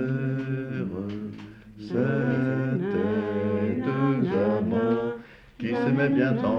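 No technical faults can be heard anywhere in this audio.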